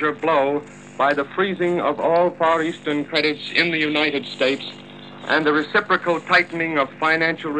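No technical faults are audible.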